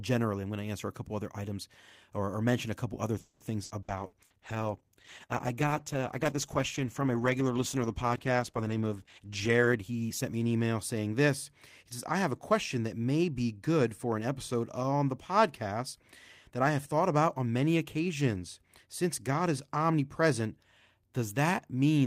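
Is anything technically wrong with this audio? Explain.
Yes, this speech clip has four call-transport faults, all within its first eleven seconds.

From 3.19 to 3.43 s, right after "mention a couple other", there is a call audio freeze. Packets were most likely held up in transit and the jitter buffer ran dry, so the receiver stretched the last sound into a fading buzz for about 210 ms before resuming where it left off. Nothing is lost, but everything after it is pushed later. On a spectrogram this shows as a smeared, decaying band with no new onsets. The waveform shows a tapering, periodic-looking stretch.

From 3.64 to 4.33 s comes repeated packet loss with a robotic sound. Four separate gaps, the longest 60 ms, were each patched by extending the previous sound, and about 35% of that span is concealment rather than real audio. The result is choppy and robotic, with fragments missing. 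A spectrogram shows short repeated, smeared blocks interrupting the normal speech structure, and the waveform shows abrupt envelope changes at each patch.

From 3.99 to 10.69 s, ending just before "saying this", there is a call bitrate drop. The bandwidth estimate fell and the encoder went from 40 to 14 kbps, holding the lowest rate for about 5.8 s. The coarser coding makes the voice rough and watery, and the top end is trimmed so it sounds muffled. On a spectrogram the upper frequencies are cut off sharply at a flat ceiling, and the harmonic detail below it turns blotchy.

From 9.08 to 10.27 s, inside that low-bitrate stretch, there is a jitter buffer speed-up. The buffer had built up excess delay, so the receiver repeatedly cut out short pitch-period-sized pieces, about a fifth of a second in total. The speech plays at about 117% speed with its pitch unchanged and sounds hurried. On a spectrogram the syllables are compressed in time while the harmonic spacing stays the same. 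The waveform shows closely spaced segments with no visible gaps.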